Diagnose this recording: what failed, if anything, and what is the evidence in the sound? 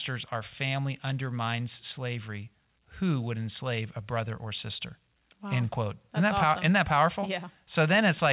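Nothing failed: the speech has the narrowband character of a call path, with no content above 4 kHz, which fits a G.711 A-law telephone codec at 64 kbps, and no dropouts, clicks, distortion or timing disturbances can be heard anywhere.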